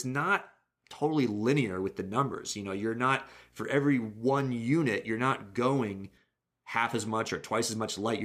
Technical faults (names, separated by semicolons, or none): video or display buzz